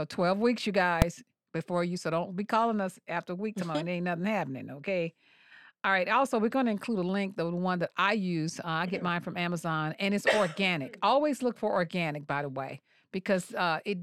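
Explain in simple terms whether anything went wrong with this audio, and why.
At 1.02 s the speech is hit by a single loud bang, an invalid-numbers-at-full-scale fault. A calculation broke down and briefly pushed the output to its maximum level. Unlike an ordinary click or a dropout, it is a very loud blast, so short it sounds like one bang.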